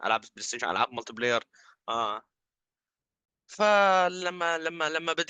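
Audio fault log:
3.25–3.28 s, gap between stream segments: mismatched segment timestamps leave a 28 ms hole that the player fills with hard-edged silence, briefly interrupting the speech without losing any audio.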